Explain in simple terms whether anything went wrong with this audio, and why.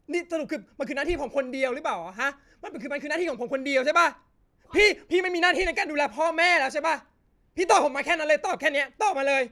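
Nothing went wrong with this speech recording that a careful listener could point to. From its first moment to its last, the sound carries on steadily with no interruption or disturbance to flag.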